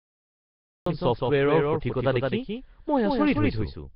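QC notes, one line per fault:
0.00–0.86 s, cut-off start: digital silence until the recording begins abruptly at 0.86 s, mid-sound, with no attack or fade. The waveform shows a flat silent line, then speech; the spectrogram shows a sharp vertical onset edge.
Throughout, doubled audio track: a second full-band copy of the speech trails roughly 150 ms behind at about 5 dB lower, with no decay or room colour, likely from a second capture path or misaligned edit. The spectrogram shows every syllable repeated as a fainter offset shadow.
Throughout, Nellymoser compression: heavy codec damage gives the speech a rough, hissy halo and a smeared, underwater quality, with nothing above 5.3 kHz, which fits a bitrate around 22 kbps. The spectrogram shows a hard ceiling at 5.3 kHz and blocky, noise-filled patches where weak bands lost their bits.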